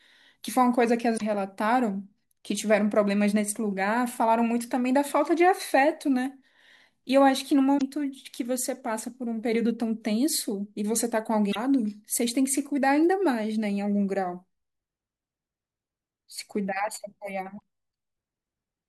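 At 1.14–1.22 s, 7.75–7.82 s, 11.48–11.56 s and 17.54–17.62 s, the speech is briefly broken by damaged data in a compressed stream. Corrupt bytes make the decoder misread frames and hunt for sync.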